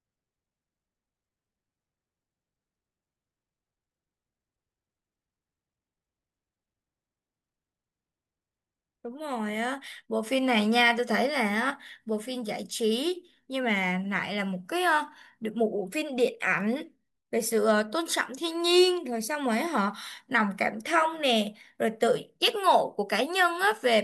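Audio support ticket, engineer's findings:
No faults found on listening; no action needed.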